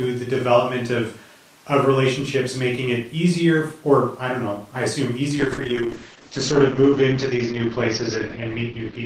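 At 5.39 s, after "don't know I assume", a call bitrate drop sets in: the bandwidth estimate collapses and the encoder is starved of bits, fitting a fall from 32 to 8 kbps. Speech turns coarse and watery, loses everything above 8 kHz, and stays muffled through 9.05 s.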